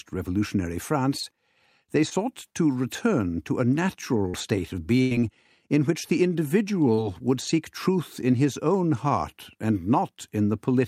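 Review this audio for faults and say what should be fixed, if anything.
Short concealed packet loss occurs three times: 2.09 to 2.13 s, 4.29 to 4.35 s and 6.95 to 6.99 s. In each case a few tens of milliseconds of audio arrived too late to be decoded, so the receiver extended the preceding sound for 16 to 44 ms and blended back into the real signal. Each one is a brief smear or wobble. Unlike the burst below, nothing fades. A larger receive jitter buffer would let late packets arrive in time.

A burst of packet loss runs from 5.01 to 5.13 s. About 100 ms of consecutive audio never arrived, so the receiver continued the last sound for roughly 93 ms, decaying it into a held buzz or fading hiss before playback resumed further along with that stretch gone. The longer, dying tail and the audible jump are what distinguish it from the brief short-loss repairs. Forward error correction or redundant packets would recover a run of this length.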